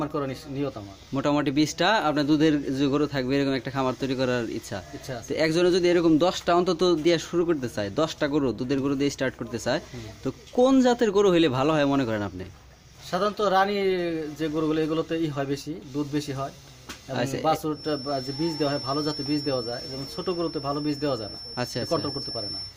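From about 17.69 s to the end at 22.77 s there's a feedback whistle, a thin steady tone near 5.4 kHz sitting well under the main sound and slowly swelling and fading. Likely a speaker-to-mic loop hovering right at the edge of feedback without taking off.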